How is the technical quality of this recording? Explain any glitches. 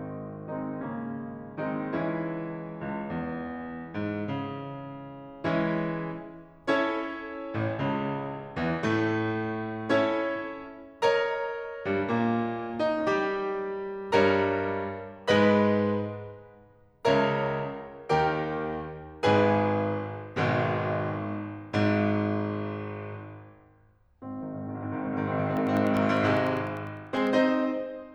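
Near the end, from 25.47 to 27.27 s, the music is broken by periodic USB or driver dropouts. Every 0.1 s, something blocked the audio path for a fraction of a millisecond and the missing samples were replaced with silence, about twenty times. This is heard as a steady ten-per-second ticking riding on the music. A waveform shows evenly spaced notches that drop to near silence, and a spectrogram shows thin vertical broadband lines at regular intervals.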